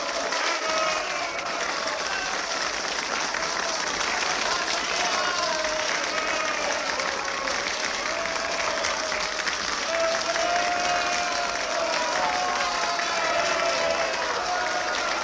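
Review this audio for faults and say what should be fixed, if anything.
Nothing to fix: the sound comes through a call path with no content above 8 kHz, which fits a G.722 wideband link, and no fault can be heard anywhere in it.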